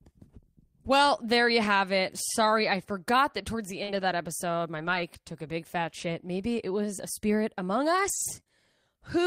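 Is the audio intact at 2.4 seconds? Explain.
Yes, at 2.4 seconds the speech plays through cleanly, with no dropout, click, distortion or other fault audible at that point.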